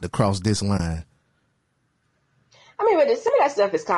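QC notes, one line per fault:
throughout: low-delay AAC compression. Short coding frames, likely at a rate around 32 kbps, resolve pitch harmonics poorly, making the speech plainly rough and grainy.
0.77–0.80 s: AAC frame loss with muting. After "to cross this", about 20 ms of audio is zeroed, pointing to one lost frame. Overlapping windows fade it into a soft gap.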